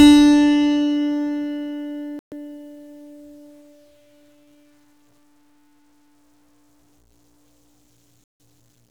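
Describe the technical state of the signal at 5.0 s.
At 5.0 s the music carries a grainy, gritty distortion that runs through the whole clip, sitting roughly 45 dB below the signal. The likely cause is low bit depth without dither: samples truncated to a coarse grid, which fits about 10 bits, leave an error locked to the waveform. Unlike steady dithered hiss or tape noise, this grit rises, falls and changes texture with the music, and quiet passages turn rough.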